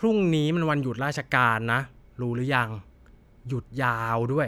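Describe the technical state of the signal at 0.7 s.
At 0.7 s the speech signal is intact, with no technical fault audible at that moment.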